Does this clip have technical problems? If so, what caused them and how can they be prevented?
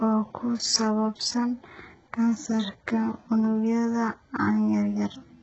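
Yes. Throughout, the speech sounds gritty and metallic with lispy s sounds and nothing above 8 kHz, likely from heavy HE-AAC compression at about 8 kbps, whose replicated treble misaligns harmonics. Encoding at a higher bitrate, or with plain AAC or Opus at adequate rates, would prevent it.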